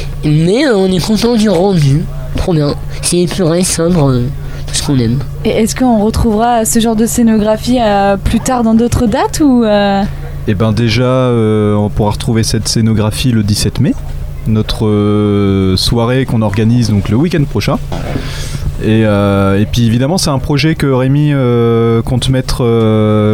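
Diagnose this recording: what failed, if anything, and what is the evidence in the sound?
Nothing failed in this recording, and the sound offers no evidence of a fault at any stage.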